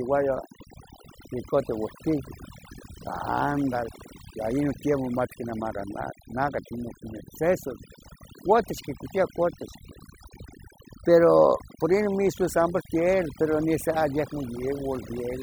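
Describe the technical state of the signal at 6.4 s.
At 6.4 s the speech carries overdone noise removal, present across the whole clip. An aggressive noise reducer is cutting frequency bands near its noise estimate, so the background drops and breaks up into twinkling specks while quieter speech detail is lost.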